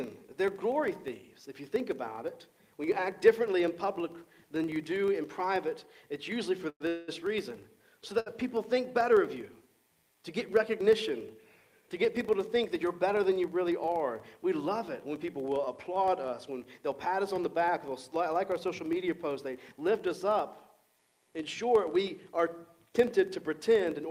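A steady 25 Hz buzz runs under the whole recording, tracking its loudness. That is a filter restarted on every block: the filter loses its state at each block boundary and starts from silence, so every block opens with a small transient, 25 times a second, which fits 40 ms blocks. At 6.69 s the sound is briefly held as a fading continuation that drops to about 60 ms of silence, and at 6.88 s it hangs again, this time without going silent, until 7.10 s. These are call audio freezes, likely caused by packets held up in transit that left the jitter buffer empty. The receiver filled 108 ms and then 196 ms before resuming exactly where it had stopped, so nothing is lost, but the timing shifts later. A briefer hold from 8.20 to 8.28 s stretches one sound for 62 ms. That is a short stall from a late packet: the buffer ran dry, the receiver sustained the last sound until the packet arrived, then carried on without a gap in content. 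From 12.48 to 13.23 s the audio runs about 6% fast at unchanged pitch, and from 18.69 to 19.73 s about 7% fast, sounding hurried. This is jitter buffer speed-up: with more audio queued than its target, the receiver repeatedly cut out pitch-period-length slices, trimming roughly a twentieth of a second and then a tenth to reduce delay.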